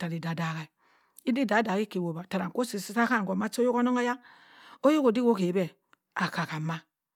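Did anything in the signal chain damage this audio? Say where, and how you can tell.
No, nothing in the chain audibly damaged this speech.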